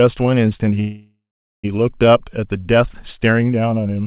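At 0.8 s the speech stalls in a call audio freeze that runs to about 1.67 s. Packets were likely held up in transit, so the jitter buffer ran dry and the receiver stretched the last sound into a fading buzz, then dead air for roughly the final 0.44 s. When audio resumes it picks up exactly where it stopped, so nothing's lost; everything after just lands about 0.84 s late. Throughout, the sound tops out at 4 kHz, consistent with a G.711 call path.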